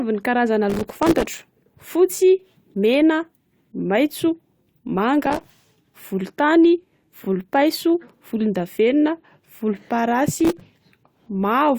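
From 0.70 to 1.40 s, and again at 5.23–5.47 s and 10.35–10.61 s, processor overload crackle tears through the speech. Many tiny buffers of about 3 ms missed their deadlines and dropped to silence, giving gritty crackle.

At 7.23–7.26 s, repeated frames cause a brief stutter. One 23.2 ms block plays twice, adding 23.2 ms.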